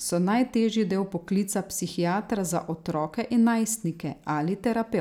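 A handful of samples, only a few, were likely dropped from the speech stream, so the waveform jumps straight to a later value. This dropped-samples fault gives a single sharp click at 1.38 s, just before "psihiatra za", and another at 4.50 s.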